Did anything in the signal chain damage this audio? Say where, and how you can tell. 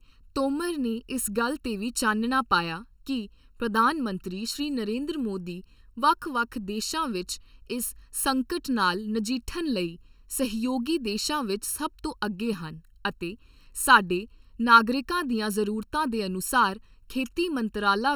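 Yes. The speech carries channel delay (comb filtering) from start to finish, which points to the driver or buffer stage where two channels are combined. It sounds hollow and phasey throughout, with no change over time. One channel arrives late by well under a millisecond, around 0.7 ms, and is then summed to mono. The shared content cancels at evenly spaced frequencies. The first notch sits near 700 Hz, with further dips repeating higher up the spectrum.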